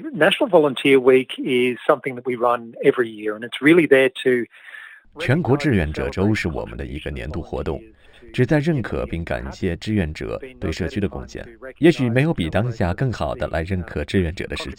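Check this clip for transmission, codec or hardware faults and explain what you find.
One fault runs through the whole clip: imaging from linear upsampling. The audio was raised from 12 kHz to 44.1 kHz by joining samples with straight lines, a weak interpolation filter that dulls the top of the original 6 kHz band and lets a mirrored copy through between 6 and 12 kHz, around 30 dB down. It adds a faint metallic shimmer to bright, hissy sounds. A spectrogram shows the content folded upward above 6 kHz.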